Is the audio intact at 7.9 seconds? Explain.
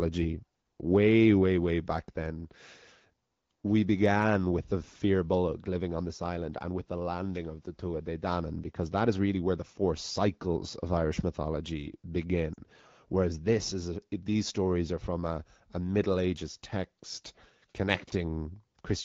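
Yes, the audio at 7.9 seconds is intact, with the speech carried cleanly through the AMR wideband (HD Voice) codec at 12.65 kbit/s and no fault at that moment.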